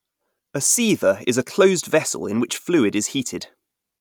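From 0.62 s to 3.63 s, the speech carries a regular tick. It recurs once every 1.0 s, about four times in all. Each tick is a clock drift buffer slip. The likely cause is two devices running on separate clocks, off by something like 200 parts per million. The buffer between them drifts until a few samples are dropped or repeated. That small jump in the waveform sounds as a brief click.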